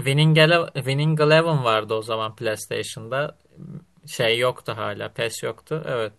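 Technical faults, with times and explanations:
No technical faults can be heard anywhere in this speech recording. There is nothing to list, with no time or range to give.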